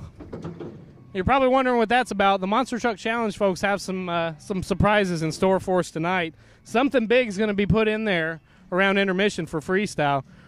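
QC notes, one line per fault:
Nothing here to flag; it all sounds the way it should.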